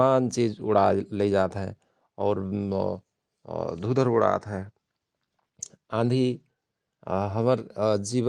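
A lost packet rebuilt from error correction at 4.35 s: the next packet's low-bitrate copy filled the 20 ms gap, so it sounds briefly rougher and noisier, without a dropout.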